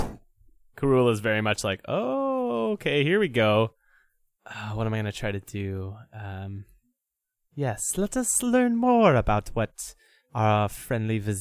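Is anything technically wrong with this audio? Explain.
No, nothing stood out as a technical problem on listening to this speech recording.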